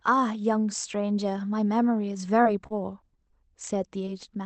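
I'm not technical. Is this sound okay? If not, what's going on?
No. Between 2.43 and 4.15 s there are scattered short gaps: about seven tiny pieces of the speech went missing, none longer than roughly 30 ms, and each was patched by stretching the previous sound. Unlike one long dropout, these are brief ticks and smears, not silence.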